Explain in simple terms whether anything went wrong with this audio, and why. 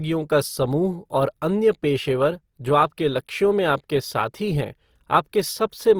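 Something did go wrong, for the whole clip. The speech sounds rough and grainy, with a noisy edge on every sound. This is likely Opus compression squeezed too hard. Short of data, it fills in detail with noise or copied sound, though the top end stays present.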